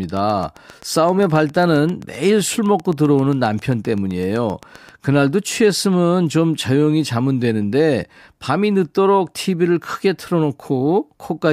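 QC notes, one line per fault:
0.04–4.90 s, train of clicks: A steady ticking sits on top of the speech for nearly five seconds. The clicks repeat at 7.62 per second, evenly spaced, around forty in all. Each one has much the same sharp shape, and they peak at roughly the level of the speech, so they stand out in the pauses. The regular pulse likely comes from electrical interference or a faulty connection or power supply.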